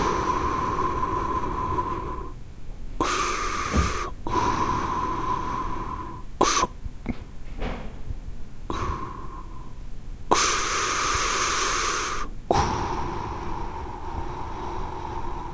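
No technical faults are audible anywhere in the recording of sounds.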